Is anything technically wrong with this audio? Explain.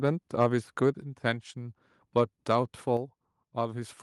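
Yes. There is microphone overload at 0.42 to 0.44 s. The peaks overshoot the converter's ceiling by about 2 dB, likely because the input volume is set too high, and a small share of samples get their tops flattened. The result is a brief harsh crackle on the loudest part of the speech.

The microphone volume is stepped down twice, at 1.02 s by about 4 dB and at 2.97 s by about 5 dB. Each drop is a sudden step, likely the call software reducing the device's input volume after detecting overload. Voice and background together fall abruptly in level, with no gradual fade.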